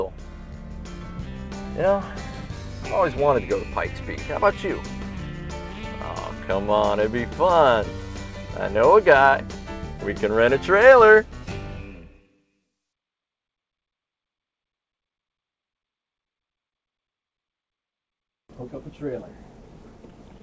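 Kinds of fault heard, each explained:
Clock drift between sender and receiver: The sending end's audio clock runs slow, roughly 3 percent behind the receiver's, so the jitter buffer on this end keeps running short of material. It can't just wait forever, so it has to keep padding things out, and that shows up as small, unevenly spaced timing hiccups running right through the clip rather than one obvious glitch. Everything comes through the G.722 call path at 64 kbps, nothing above 8 kHz.
Repeated timing corrections: This is the receiver's answer to that slow clock. From about 0.09 s to 19.6 s it keeps quietly repeating tiny slivers of sound, all stretching in the same direction, so the playback effectively runs at 97 percent speed. Over the whole stretch that adds up to about half a second of extra material. Each edit is small, so you mostly hear it as a faintly unsteady, slightly dragging tempo with the odd hiccup.
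Short stall from a late packet: At about 16.69 to 16.75 s a packet didn't turn up in time and the jitter buffer ran dry. Instead of leaving a hole, the receiver held the last bit of sound for 28 ms until the packet arrived, then picked up exactly where it left off, so nothing is actually lost. What you catch is a brief smeared hold there, maybe a little buzzy, and the delay shifts by 28 ms afterwards.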